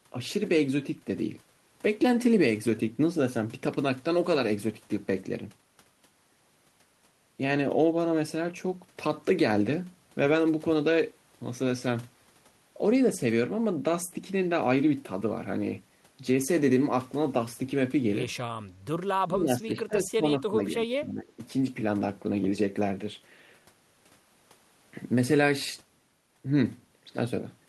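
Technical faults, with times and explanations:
19.25–20.69 s and 20.87–21.39 s, speech suppressed in double talk: this is likely an echo canceller that, with both ends talking at once, could not tell the local talker from loudspeaker echo and turned everything down. The speech dips sharply, by about 20 dB at worst in the first stretch and about 15 dB in the second, and parts of it thin out or drop away, for roughly a second and then under half a second.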